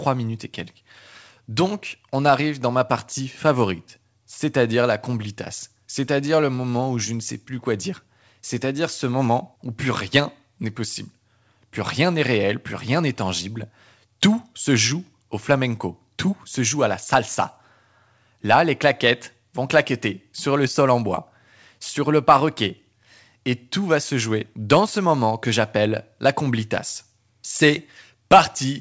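No technical faults can be heard in this speech, which comes through a WebRTC call path whose wideband codec leaves nothing above 8 kHz, and the audio stays steady throughout without gaps, glitches or level jumps.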